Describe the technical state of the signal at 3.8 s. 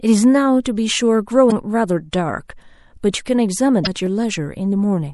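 At 3.83 to 3.87 s the speech breaks up from damaged data in the compressed stream. Corrupted frame data there leaves the decoder misreading frames and hunting for the next valid header, so roughly 44 ms of the signal is disrupted before normal decoding resumes.

Underneath, across the whole clip, the speech carries plainly audible MP3 compression artefacts: a watery, swirling quality where weak frequency lines drop in and out between frames. That degree of damage is likely from a low-bitrate encode, consistent with about 64 kbps.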